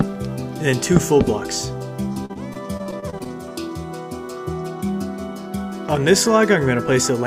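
Repeated packet loss (robotic sound) runs from 2.13 to 3.28 s: a rapid string of short dropouts, the longest about 39 ms, each patched by extending the preceding sound. Around a fifth of that stretch is filled this way, leaving it choppy.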